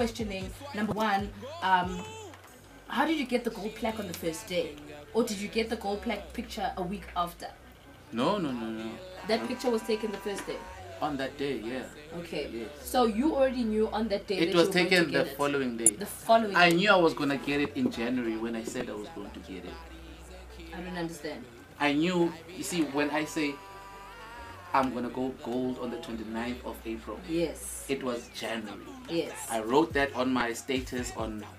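Damaged data in a compressed stream corrupts this audio four times: parts of the encoded stream arrive wrong, so the decoder misreads those frames, loses sync and has to hunt for the next valid frame header. Each event is heard as a brief chirp or blip, at 0.89 to 0.92 s, 15.86 to 15.89 s, 18.80 s and 30.40 s. The first two last about 30 ms, and the last two are momentary glitches of roughly 10 ms.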